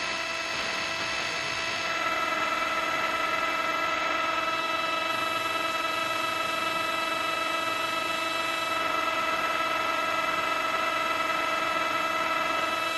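No technical faults can be heard anywhere in this recording of sounds, and the signal stays intact throughout.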